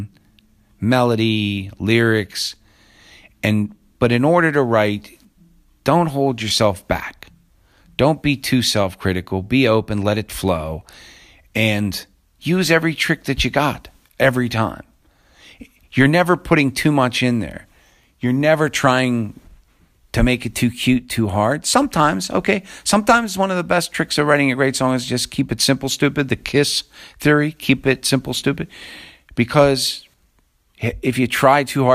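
No technical faults can be heard anywhere in the recording.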